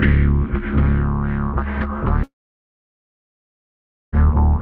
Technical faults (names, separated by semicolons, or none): long network dropout